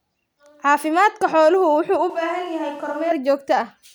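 Switch to a distant microphone, 2.10 to 3.11 s: speech abruptly turns hollow, roomy, thinner and about 10 dB quieter, likely because the close microphone failed.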